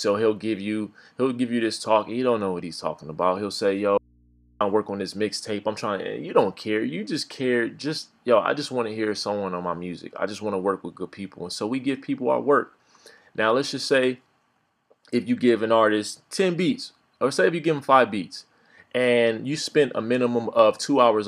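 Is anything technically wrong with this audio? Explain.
Yes. From 3.98 to 4.61 s there is an audio dropout to a faint residue. The sound cuts out abruptly for about 630 ms, leaving only hum roughly 35 dB down, likely a lost signal on a still-live input. The waveform collapses to a thin band, and the spectrogram shows a blank gap crossed only by low hum lines.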